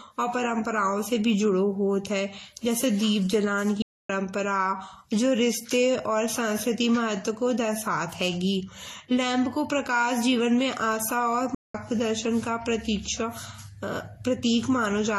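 Throughout the speech, transcoding between lossy codecs, likely MP3 then Vorbis at low bitrates, leaves smeared, doubled artefacts; the spectrogram keeps the lowest cut-off in the chain. Playback stalls at 3.82 s and 11.55 s, likely from data underrun, cut the sound for about 0.27 s and 0.20 s, appearing as flat gaps in the waveform.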